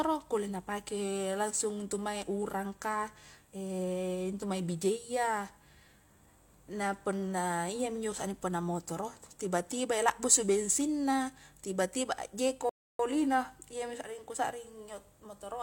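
At 12.69 s the player ran out of downloaded audio, a rebuffering stall, and halted until more data arrived. The speech drops to silence for 0.3 s, until 12.99 s, then picks up exactly where it stopped, losing nothing but adding that pause.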